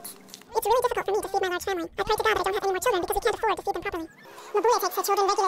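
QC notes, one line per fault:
Throughout: audio read two samples at a time (double speed). Paired samples taken as single frames, so playback runs at 2x and an octave (12 semitones) higher. On the spectrogram, harmonics sit at double their frequencies. The waveform looks time-compressed.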